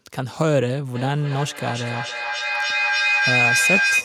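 Speech recording with feedback howl starting at 0.95 s and running to the end of the clip. A microphone and loudspeaker in the same room are joined in one call, so sound picked up is replayed and picked up again with more gain on each pass. Repeats spaced roughly every 300 ms grow instead of decaying and narrow to a tone around 3 kHz, which peaks about 2 dB louder than the speech.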